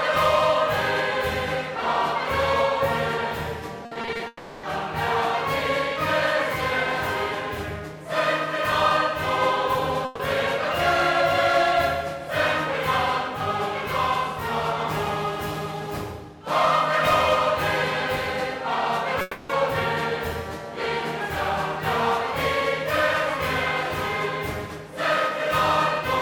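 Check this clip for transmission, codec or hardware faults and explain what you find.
Four transmission faults are audible, all from packets lost on the way to the receiver.

From 3.85 to 4.21 s there is repeated packet loss, which gives a robotic sound. Six short holes, the longest 60 ms, were each patched by extending the preceding sound. About 160 ms is filled in, nearly half the stretch. The result is choppy, with pieces missing.

From 4.27 to 4.65 s and from 19.21 to 19.51 s, a fading buzz or hiss replaces 360 ms and then 280 ms of audio. Neither gap falls fully silent. The likely cause is a long network dropout, with the receiver concealing throughout. The sound resumes later, with the lost part gone.

From 10.05 to 10.21 s comes a burst of packet loss, 140 ms in all. The receiver continues the last sound and turns it down across the gap. It is heard as a brief fading buzz or hiss. 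The sound then picks up further on, with that piece missing.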